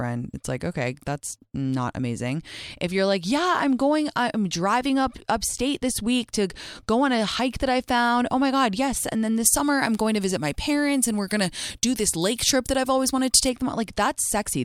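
From 9.46 s to 13.49 s, right after "then this", the speech turns thin, bright and sibilant: pre-emphasis left on. The treble lift applied before recording or transmission was never undone by the matching de-emphasis. The shape fits the FM 50 µs curve, and at 10 kHz the highs sit about 10 dB above their level at 1 kHz. Sibilants hiss and the body of the sound recedes until the passage ends.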